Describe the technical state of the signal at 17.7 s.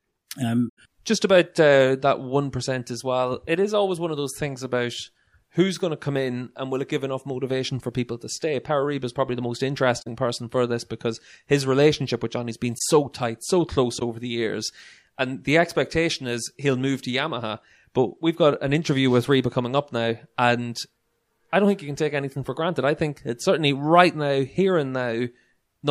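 At 17.7 s the speech signal is intact, with no fault to be heard at that moment.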